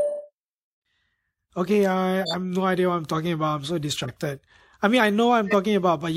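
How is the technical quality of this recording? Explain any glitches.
The recording has two kinds of codec damage: a brief skip near the start and three short bursts of corrupted sound later on.

Between 0.63 and 0.82 s the speech jumps forward, losing around 50 ms of audio. These are compressed frames skipped: whole frames were missing or rejected by the decoder as damaged, so playback leapt ahead by a multiple of the frame length.

Three times a chirpy, squeaky burst of noise cuts through the speech. From 2.22 to 2.34 s, just before "have no idea what", it peaks at about −15 dBFS and spans roughly two frames. From 4.03 to 4.11 s a single-frame blip reaches about −20 dBFS. From 5.47 to 5.54 s, right after "I mean I", the loudest burst peaks at about −10 dBFS across roughly two frames. Each is a corrupt frame decoded: flipped bits went unnoticed, and misread gains and codes put energy at the wrong frequencies for the duration of each damaged frame.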